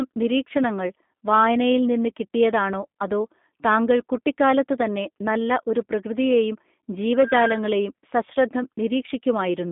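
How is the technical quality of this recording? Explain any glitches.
The quality is limited by telephone-style coding that runs the whole way through: this speech has clearly been through a G.729 codec. Nothing gets past about 3.7 kHz, and the usable band sits at roughly 200 Hz to 3.6 kHz, so it sounds thin and boxy. Rather than storing the waveform, the codec rebuilds each short frame from a vocal tract filter, a pitch predictor and a few pulses. The result has a plainly audible rough, synthetic edge, which fits an 8 kbit/s G.729A link.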